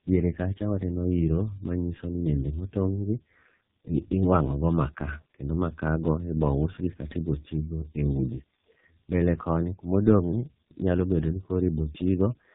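Tandem speech coding runs through the whole clip. Two low-rate speech coders were applied one after the other, which fits AMR-NB followed by G.723.1. The second coder reworks the first's errors. The speech sounds rough, muffled and warbly, with nothing above 3.8 kHz.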